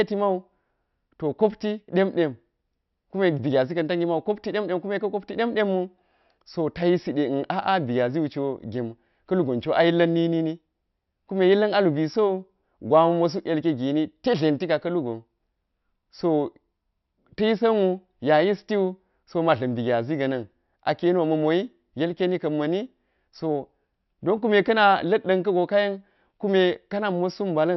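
Nothing technically wrong turns up anywhere in this speech recording, so there are no times or causes to report.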